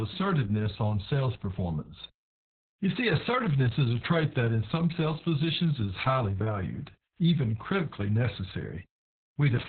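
From start to finish the speech runs through Opus voice compression starved of bits, working in its narrowband SILK mode, and the heavy damage fits a bitrate near 6 kbps with long 60 ms frames. The coder discards everything above 4.3 kHz and describes the excitation only crudely, so the voice sounds muffled and telephone-thin, with a hoarse, buzzy roughness and a faintly robotic quality.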